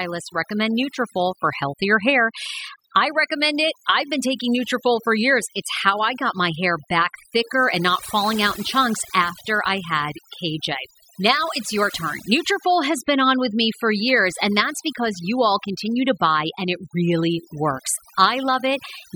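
Overdone noise removal runs through the whole clip. The noise reduction was set too aggressively, so frequency bands near the noise estimate are pulled down or gated off, taking quiet speech detail with them. Pauses fall to near silence with twinkling specks.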